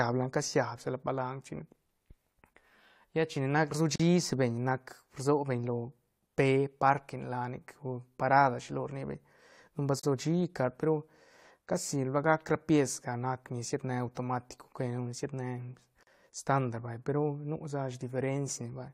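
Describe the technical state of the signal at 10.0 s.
At 10.0 s there's a gap at a join of encoded pieces. From 10.00 to 10.03 s the speech just drops out for about 37 ms, with edges that the codec has smeared, then picks up exactly where it left off. The audio was encoded in separate chunks and stitched together without trimming, so the encoder's start-up delay and end-of-chunk padding come through as silence. Joins land every 6 s, which fits pieces about that long.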